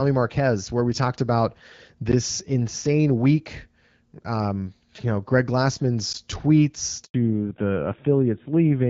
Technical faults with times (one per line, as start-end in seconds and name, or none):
2.12 gap between chunks
6.13 gap between chunks
7.04-7.14 handover gap
7.14-8.90 fallback to narrowband